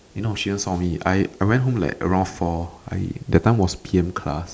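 No faults are audible anywhere in the recording.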